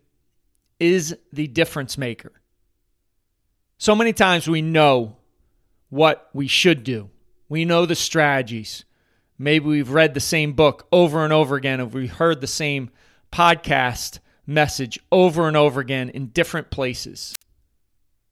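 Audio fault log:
17.32–17.42 s, wireless microphone squelch dropout: the analogue FM radio link fades, a short burst of hiss rises, and the receiver's squelch mutes the output for about 60 ms, leaving a near-silent hole before the speech returns once the signal recovers.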